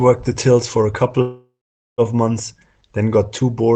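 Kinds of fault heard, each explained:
Call audio freeze: at 1.21 s the sound trails into a fading buzz or hiss, then silence, resuming intact at 2.01 s; likely delayed packets draining the jitter buffer.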